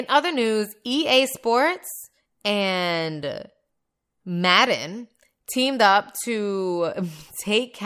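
No technical faults can be heard anywhere in this speech recording.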